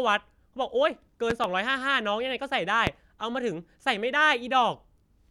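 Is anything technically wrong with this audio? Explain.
Yes. A sudden voltage spike, likely from a plug, switch or static discharge, adds loud pops well above the speech: a double pop at 1.30–1.47 s and a single one at 2.87–2.90 s, while speech continues underneath.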